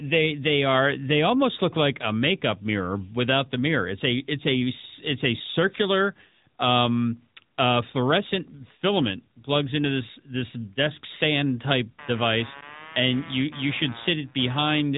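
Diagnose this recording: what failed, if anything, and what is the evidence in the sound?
The failure is at the codec stage. The whole recording has passed through the AMR narrowband mobile codec. Nothing above 3.8 kHz survives, so sibilants lose their edge and the speech sounds boxed in. The damage is plainly audible for the full length: a buzzy, synthetic texture on voiced sounds. AMR-NB rebuilds speech from a vocal-tract model excited by a few pulses per 5 ms slice, and detail is lost. The level of damage fits a high-rate mode at 10.2 kbps.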